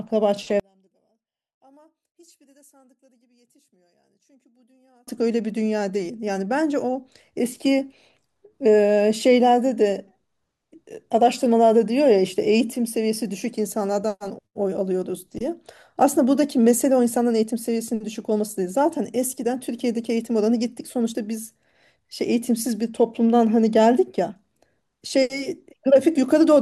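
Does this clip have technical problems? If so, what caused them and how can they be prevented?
Yes. From 0.60 to 5.07 s the speech nearly disappears when heard in mono, dropping by about 37 dB to a faint residue. The likely cause is one channel inverted: with one side's polarity reversed, the centred speech cancels when the channels are summed. On a mono waveform this shows as a near-flat stretch; on a spectrogram the band goes almost empty. Checking polarity and mono compatibility with a correlation meter prevents it.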